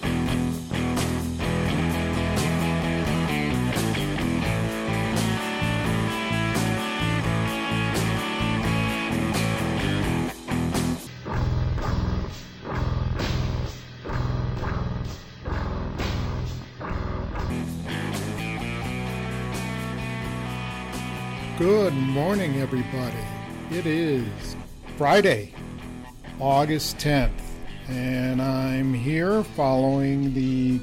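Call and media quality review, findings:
Half-speed, octave-low audio with a faint mirrored image in the upper spectrum, 11.07 to 17.5 s. Stereo read as mono: interleaved left and right samples are read sequentially as one channel.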